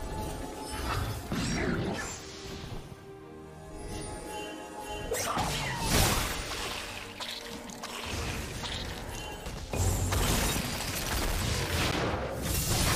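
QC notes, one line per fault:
11.91 s, gap between stream segments: a clean 10 ms hole of silence with hard edges cuts into the sound, right where one 6-second segment hands over to the next. Their timestamps don't quite meet, so the player pads the space with silence, though nothing's actually lost.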